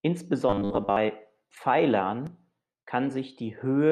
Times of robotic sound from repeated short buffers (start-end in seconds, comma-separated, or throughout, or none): 0.49-0.96